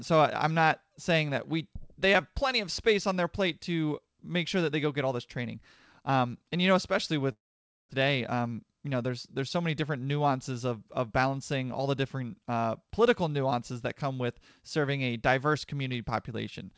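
Right after "and you know especially", at 7.32 s, the speech breaks off and stays gone until 7.93 s. That sounds like a long network dropout: the receiver keeps the last bit of sound going as a fading buzz for a moment, then there's about half a second of near-silence. Roughly 400 ms of audio never comes back. The likely cause is a burst of lost or badly delayed packets, which also pushed the buffer delay up by around 150 ms.

Straight after, from 8.01 s to 9.97 s, the speech runs quick, ending just before "nuances of of balancing". That's a jitter buffer speed-up. With all that extra audio backed up, the receiver trims tiny pitch-period slices over and over, about 200 ms in total, so the talker sounds hurried at about 109% speed but with unchanged pitch. Through all of it the G.722 call path keeps the sound capped at 8 kHz.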